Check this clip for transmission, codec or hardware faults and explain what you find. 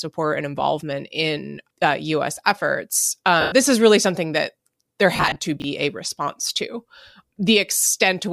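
There are two kinds of fault here: dropped Bluetooth LE Audio frames in two places, and one short stretch of chunks out of order. The light breathy graininess throughout is likely from LC3 compression, consistent with a moderate rate around 64 kbps in 10 ms frames.

Lost LE Audio frames, 3.41 to 3.52 s and 5.16 to 5.36 s: The first dropout is a solid 110 ms gap, about eleven 10 ms frames. The LC3 decoder papers over missing frames by replaying the last good spectrum with scrambled phase signs and fading it down. So the speech there smears into a hissy, tonal wash that sinks toward quiet. The second dropout is messier: 140 ms of loss spread over about 200 ms, with no run much beyond 30 ms. Instead of one fade, you hear a stuttery, grainy flutter as concealment keeps kicking in and letting go.

Chunks out of order, 5.60 to 5.64 s: A 20 ms block of audio turned up one chunk late and got played after the chunk that should have followed it. 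Nothing is actually missing, but the sequence is swapped, leaving three hard seams where the waveform jumps. By ear it's a brief garbled jolt, just after the second frame-loss patch.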